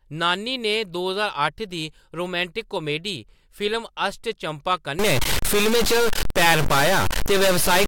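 From 4.99 s to the end at 7.87 s, the speech turns harsh and buzzy. Pauses fill with loud noise. This is likely a stuck bit. One data bit holds a fixed value, so about half the samples jump by steps near -15 dBFS.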